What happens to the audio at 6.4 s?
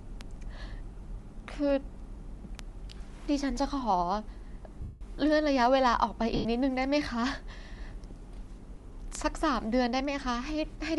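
From about 6.36 to 6.45 s the speech turns into a brief noisy smear that fades rather than stopping cleanly. These are lost LE Audio frames: roughly 90 ms went missing, which fits nine 10 ms frames. The decoder concealed the gap by reusing the last spectrum with random signs and fading it after the first few frames.

Sharp single-sample ticks of uneven strength also run through the clip, about every 0.3 s from 0.21 to 10.94 s. These word clock ticks come from a receiver whose clock is not locked to the sender's, drifting by roughly 70 ppm, so one sample slips at each crossing.

Under everything, the speech has a breathy, grainy top end, likely from Bluetooth LC3 compression at around 48 kbps with 10 ms frames.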